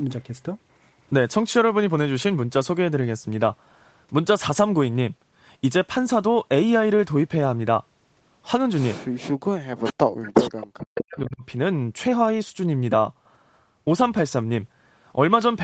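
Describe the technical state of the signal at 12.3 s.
At 12.3 s the speech is intact, with no dropout, click or distortion, only the call path's normal band limit, with nothing above about 8 kHz.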